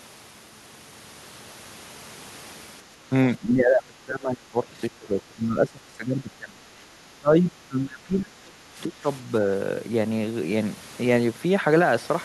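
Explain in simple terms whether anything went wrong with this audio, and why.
From about 3.4 s to 9.05 s, the speech keeps sinking to a much quieter level for most of that stretch. This is speech suppressed in double talk, likely because both sides spoke at once and the echo canceller turned everything down.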